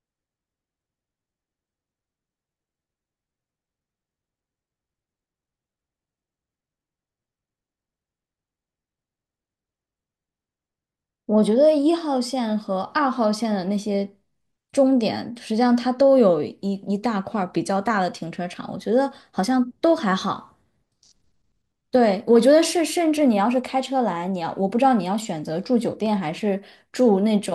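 No technical faults are audible.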